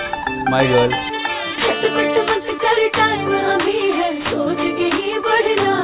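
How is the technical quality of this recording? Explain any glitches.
The technical quality is compromised by one fault that runs through the whole clip.

Aliasing is present from start to finish. The audio was resampled down, which points to a drop from 48 kHz to 8 kHz, without a low-pass filter first. Anything above 4 kHz folded back below that edge at unrelated frequencies. The folded energy sits roughly 15 dB under the wanted sound. Bright, hissy content turns gritty and metallic. The spectrum stays dense right up to 4 kHz.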